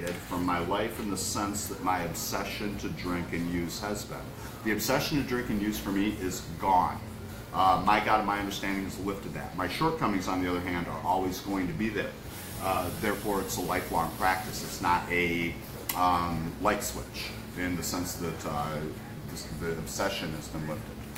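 A filter restarted on every block runs through the whole clip, from start to finish. Instead of carrying its internal state forward, the filter starts each new block from silence, so every block opens with a small transient. The restarts repeat at 172 Hz, which fits a 256-sample block, and the result is a steady buzz at that rate. It grows louder and softer with the level of the sound.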